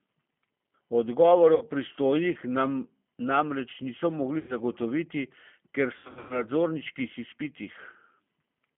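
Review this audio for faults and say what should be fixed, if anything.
The whole recording has G.729 codec damage. The speech is confined to roughly 150 Hz to 3.4 kHz, with nothing above that band, and the voice has a plainly rough, synthetic texture. This fits an 8 kbit/s G.729A coder rebuilding each frame from a vocal tract filter, a pitch predictor and a few pulses. Simple band-limiting would only dull the sound, but this adds a grainy, artificial quality. Carrying the call on a wideband codec such as G.722 or Opus would prevent it.

VoIP packet loss concealed by the speech codec occurs three times. From 1.55 to 1.65 s about 60 ms is missing. From 4.39 to 4.56 s, right after "namreč niso", about 100 ms is missing. Between 5.97 and 6.44 s, gaps totalling about 260 ms are scattered over 320 ms, and the longest run is 100 ms. In each case the decoder stretches the last pitch and filter into a fading buzzy tone or coloured noise, and the voice stays weak briefly afterwards. 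Plain dropouts would instead cut to silence or click. Better jitter buffering and network QoS, or forward error correction, would prevent these losses.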